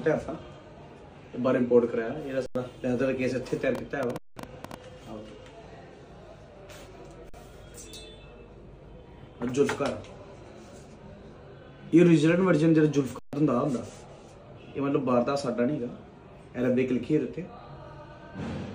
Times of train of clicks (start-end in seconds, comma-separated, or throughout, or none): 3.75-4.75